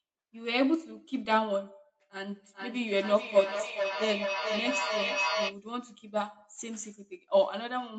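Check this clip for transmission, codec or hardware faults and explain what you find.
A feedback echo between two devices runs from 2.21 to 5.59 s. A second device in the room replays the call and its microphone resends it, so the sound returns roughly every 0.4 s, peaking at about 3 dB below the speech. Unlike a single room reflection or codec echo, it recurs at a fixed spacing, each pass thinner and more ringing.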